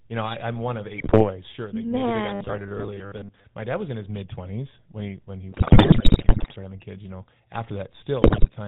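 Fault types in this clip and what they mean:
GSM full-rate codec: The whole clip has passed through the original GSM speech codec, which fits a 13 kbps stream. It rebuilds the voice from a vocal-tract filter fed by sparse, regularly spaced pulses. Much of the fine detail of the excitation is thrown away. The result is a plainly audible buzzy, gravelly roughness. The sound is also band-limited, with nothing above 4 kHz, so it has a dull, boxed-in telephone quality.
GSM bit errors: These are flipped bits in the coded stream that corrupt the decoder's filter, pitch or gain values, one frame at a time. The spectrum bends or the level jumps, giving squawks, pops and gargling. The first burst runs from 0.98 to 1.30 s, right after "I am one of". The longest runs from 5.52 to 6.53 s, between "when he when he" and "having kids". A final burst falls at 8.22 to 8.50 s.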